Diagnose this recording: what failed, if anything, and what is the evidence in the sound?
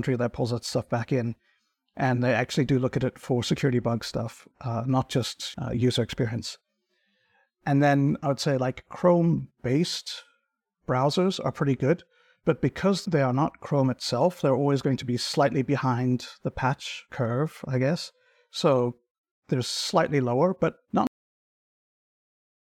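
A cut-off end, a storage or buffer failure: the speech stops mid-sound at 21.07 s, right after "slightly lower but not", and the final buffers were never written. The waveform drops to flat digital silence with no decay, and the spectrogram shows a hard vertical edge followed by blank time.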